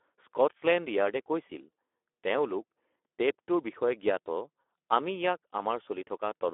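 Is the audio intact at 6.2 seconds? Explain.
No. At 6.2 s the speech still carries the Speex codec damage that runs through the whole clip. At about 11 kbps the CELP excitation is starved, so speech sounds hoarse and noisy. A spectrogram shows energy confined to roughly 300 Hz–3.5 kHz, with smeared harmonics.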